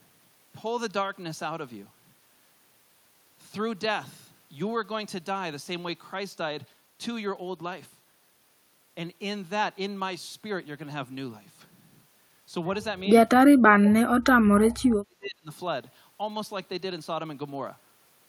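From 13.54 to 15.52 s the speech drops by about 35 dB: speech suppressed in double talk, likely an echo canceller mistaking overlapping talk for echo.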